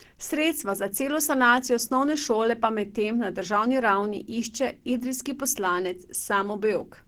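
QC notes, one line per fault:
Throughout, Opus compression: speech sounds hoarse, grainy and somewhat muffled, without MP3-style swirling holes, likely from a hybrid-mode encode around 16 kbps.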